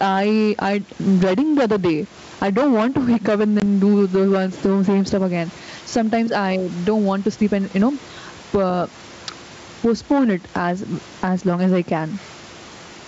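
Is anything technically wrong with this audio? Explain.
Yes, two faults are audible in this speech clip.

Gain pumping runs throughout, with a gain swing of around 15 dB. The room noise sits about 35 dB below the speech. The likely cause is input gain set far too high, with a fast limiter clamping down on peaks. Unlike a noise gate, the background never cuts out.

Packet loss on an ADPCM call occurs at 3.60 to 3.63 s. A hard-edged 20 ms silence, consistent with a single lost packet, is followed by slight distortion. The wideband ADPCM coding here points to G.722, whose adaptive predictor and step size fall out of step after the gap and resynchronise within tens of milliseconds. That recovery tail is what distinguishes it from a plain dropout, which would resume cleanly.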